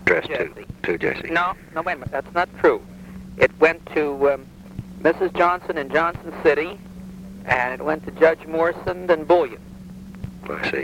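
Throughout the clip, the audio was likely reduced to low bit depth without dither, with the signal rounded to about 9 bits and no noise added to break up the steps. Because the rounding error tracks the waveform, it behaves as distortion rather than as independent noise, sitting roughly 40 dB below the signal. Quiet passages turn grainy, and detail smaller than one step collapses to silence or flickers between adjacent levels. Where the material is dense, the error can instead blur into a near-steady hiss.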